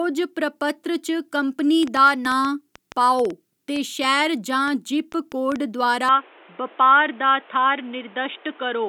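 A train of clicks runs from 1.83 to 5.57 s: about twenty similar pops at an uneven pace averaging 4.8 per second, peaking about 5 dB above the speech and ticking through pauses too. The likely cause is interference from nearby equipment or a struggling interface injecting pulses.

At 6.09 s the input is switched to a poorer device, likely another microphone or a headset's call profile. From there to the end, nothing above 3.8 kHz remains, so the speech turns dull and boxy. The change comes with no silence and little change in level, over new background noise roughly 30 dB down.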